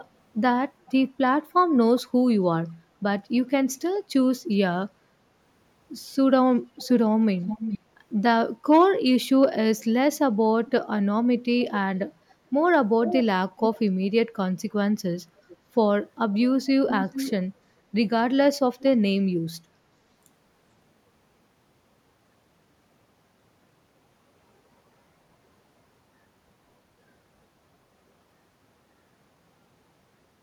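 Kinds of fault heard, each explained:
Echo leak: a delayed copy of the speech returns 410 to 432 ms late, sometimes fairly strong. It is likely loudspeaker echo the canceller missed.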